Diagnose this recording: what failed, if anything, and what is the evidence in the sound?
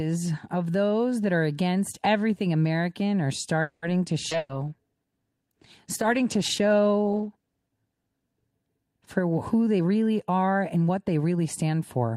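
At 3.61 s the speech stops and a continuation of the last sound fills about 210 ms before the talk picks up at 3.85 s exactly where it left off, with nothing lost. This is a call audio freeze, most likely a network stall that let the jitter buffer run dry, so the receiver's concealment bridged the wait. On a spectrogram the last harmonic pattern smears flat and decays. The waveform shows a steady, shrinking stretch with no missing segment.

From 4.30 to 4.34 s there is a skip ahead. Roughly 70 ms of speech is gone, and only about 10 ms of filler joins the two sides, so the talk lurches forward almost seamlessly. This points to the jitter buffer or network discarding a stretch of audio while later packets were already queued, which shortens the delay by about 50 ms. The spectrogram shows an abrupt formant discontinuity at the join rather than a gap.

A burst of packet loss follows at 4.37–4.52 s. 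About 120 ms of speech is missing and is replaced by 120 ms of concealment, a held continuation fading in level before the speech resumes further on. This is a network-stage fault: consecutive packets were lost or arrived too late to play. A spectrogram shows a frozen, dimming band, and the waveform shows the held sound tapering in amplitude with no true silence.

From 4.4 s until 8.62 s, just before "for who they", the speech turns rough and muffled. This is a call bitrate drop, where the encoder falls from 40 kbps to 16 kbps and stays at the lowest rate for about 4.1 s. The cause is a fall in the call's bandwidth estimate, which leads the Opus codec to code coarsely and trim the top end. On a spectrogram the upper band thins and cuts off sharply, and the harmonics look blotchy and quantised.

Between 4.54 and 4.77 s the jitter buffer slow-down stretches the speech to about 82% speed at unchanged pitch. 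The receiver inserted about 50 ms by repeating single pitch periods to rebuild its reserve, so the sounds are audibly drawn out. In the waveform, identical consecutive cycles appear duplicated. On a spectrogram the formant transitions are elongated horizontally while the harmonic spacing stays the same.

Right after "for who they", from 9.80 to 10.90 s, the speech sounds hurried. It plays at about 118% speed with the same pitch, which is a jitter buffer speed-up. The buffer held more audio than its target, so the receiver cut out short pitch-period pieces, roughly 200 ms in total, to reduce the delay. On a spectrogram the syllables and formant glides look compressed in time without any upward shift of the harmonics. The waveform shows periods spliced out.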